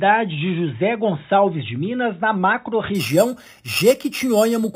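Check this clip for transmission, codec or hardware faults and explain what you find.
There's one fault: imaging from sample-and-hold upsampling, from 2.95 s to the end. The 8 kHz audio was raised to 48 kHz by repeating samples without smoothing, so mirrored spectrum copies appear, the first at 4 to 8 kHz, about 15 dB down. That's the metallic fizz tracking the level.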